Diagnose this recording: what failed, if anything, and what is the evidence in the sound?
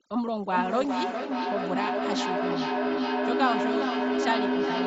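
The call processing stage applied overdone noise removal throughout the clip. The background collapses to near silence dotted with twinkling specks. A spectrogram shows isolated bright flecks between phrases and holes where quieter speech bands were gated away.

From 0.45 s to the end, there is a feedback echo between two devices. A second device in the room replays the far microphone, and that sound is re-captured. Repeats arrive about every 0.4 s and peak at about the speech level. The waveform shows stacked, evenly spaced copies that don't die away.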